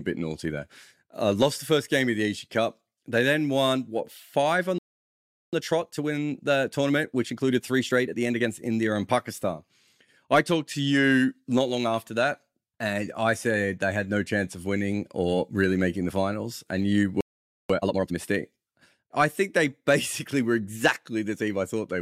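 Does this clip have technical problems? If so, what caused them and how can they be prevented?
Yes. The speech has two playback stalls, at 4.78 to 5.53 s (about 0.75 s) and 17.21 to 17.70 s (about 0.49 s). Output falls silent mid-flow, most likely because the player's buffer ran dry or its audio thread was blocked. A deeper playback buffer and a higher-priority audio thread would prevent this.

Each stall is followed by time-compressed catch-up. From 5.53 to 8.51 s the speech runs 1.25 times fast, and from 17.70 to 18.18 s it runs twice as fast. The player removes small cross-faded slices to clear its backlog, so the speech sounds hurried at normal pitch. Preventing the stalls removes the need for catch-up, or the player can be set to resume without compressing.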